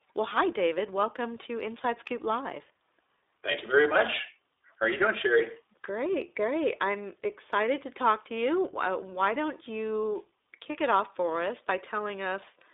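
Throughout the recording, the speech has passed through the iLBC codec, a narrowband VoIP coder that rebuilds each short frame's excitation independently of the one before. The telephone-style line limits the band to roughly 300 Hz to 3.7 kHz, so the speech loses its low body and all the air and sibilant detail above that. The coding damage is plainly audible, giving the voice a slightly rough, synthetic edge, and the character fits iLBC's 15.2 kbps mode with 20 ms frames.

From 3.52 to 3.56 s, there are lost iLBC frames. A 20 ms stretch of audio never reached the decoder, consistent with a single dropped frame. The decoder covered the hole by repeating the last pitch cycle blended with noise, which comes across as a brief held, faintly buzzy vowel-like sound in place of the real speech. Because each iLBC frame decodes on its own, the speech sounds right again immediately after the gap.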